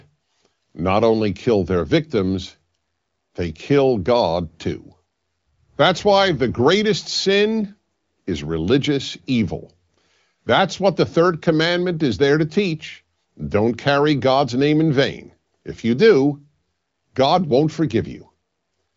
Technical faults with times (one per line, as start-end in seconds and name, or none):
none